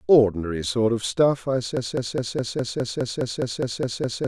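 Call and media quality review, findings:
Broken-record loop from 1.77 s to the end: a roughly 0.21 s fragment of speech repeats back to back, about 12 times, with identical audio each pass. Likely a stalled player or stream that keeps replaying its last held chunk. Whatever was said after 1.77 s is lost.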